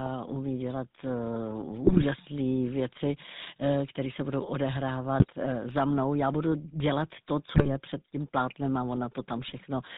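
Across the whole recording the speech carries the sound of the GSM full-rate codec at 13 kbps, and the damage is plainly audible. The codec rebuilds the voice from a vocal-tract filter fed by a sparse, regularly spaced pulse excitation and discards everything above 4 kHz, so the speech sounds band-limited, dull at the top and coarse, with a buzzy, gravelly grain.

GSM bit errors then break through at three points. From 1.86 to 2.06 s, corrupted parameters reach the decoder over roughly ten 20 ms frames, and the spectrum and level lurch into squawking and popping. At 5.20 to 5.28 s, just before "uh za mnou", a shorter burst gives a brief gargling pop. From 7.56 to 7.69 s, between "budu dělat to" and "před tím plátnem a", damaged filter, pitch and gain values distort the voice again. The density of these glitches points to a bit error rate of a few percent.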